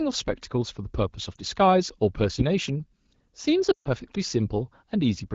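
Around 1.35 s there's a short dip and warble, a single lost AMR speech frame. At 3.71–3.88 s a longer run, consistent with about seven frames, cuts out as the HD Voice decoder reuses the last good frame and drops to near silence within two frames.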